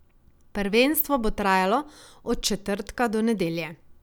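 No technical faults are audible.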